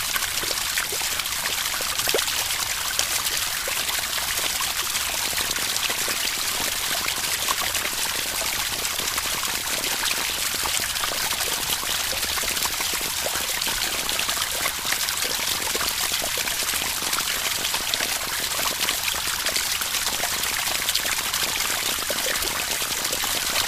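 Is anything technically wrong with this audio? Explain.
Yes. From 5.26 s to 23.63 s a train of clicks runs over the sound, around two hundred similar pulses at about 13.1 per second with irregular spacing, peaking roughly 5 dB above the signal. Interference from nearby equipment or a faulty connection or power supply is the likely cause. It is heard as uneven ticking, in pauses too.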